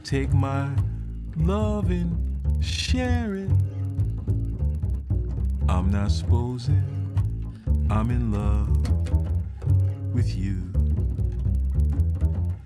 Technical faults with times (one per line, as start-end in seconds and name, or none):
0.00-12.65 resampler restarted on every block